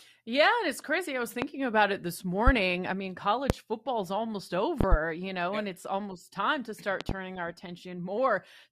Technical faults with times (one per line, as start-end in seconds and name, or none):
1.42-1.46 loud pop
2.47-2.51 loud pop
3.50-3.54 loud pop
4.81-4.96 loud pop
7.01-7.13 loud pop